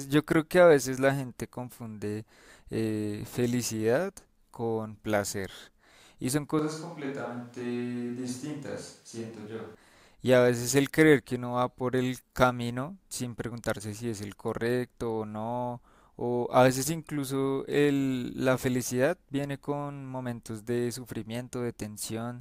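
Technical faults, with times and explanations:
6.59 to 9.75 s, switch to a distant microphone: speech abruptly turns hollow, roomy and thinner, a few decibels quieter with more background noise, likely from a farther microphone replacing the close one.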